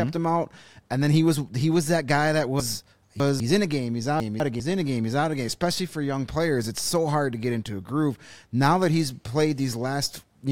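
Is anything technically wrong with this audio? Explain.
Yes. Chunks out of order occur twice in this speech. From 2.6 to 3.4 s, after "was that guy that" and before "in a game he's", a 200 ms chunk plays three chunks late. From 4.2 to 4.6 s, near "in a game he's", a 200 ms chunk is one chunk late. Nothing is missing. The late piece simply lands after the audio that should follow it. Each swap leaves three hard joins. The passage sounds jumbled.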